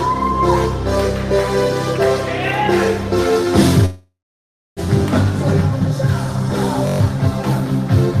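At 3.85 s the sound stops moving forward and a fading buzz carries the last moment on. It then drops to silence for about 640 ms. It resumes at 4.80 s, where it left off. This is a call audio freeze, likely from delayed packets draining the jitter buffer. Nothing is lost, but everything after arrives 912 ms late.

At 6.87 s a system hang loop begins. One 21.33 ms slice repeats six times, which fits a 1024-sample buffer. It sounds like a steady buzz at 46.9 Hz until 7.00 s. Around 150 ms of audio is gone when playback resumes.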